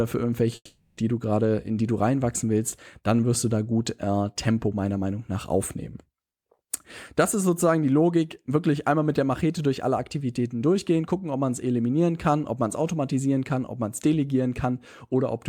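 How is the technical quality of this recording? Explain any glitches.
There's one clear glitch, early on. From about 0.55 to 1.0 s the speech cuts out: the last sound gets stretched into a buzzy, fading hiss for roughly 0.42 s, then a short gap of about 50 ms of near-silence, and it picks back up at "du gerade in die" with around 0.42 s of speech simply gone. That's the signature of a long network dropout, likely: the packets never arrived, the receiver papered over the hole, then skipped ahead.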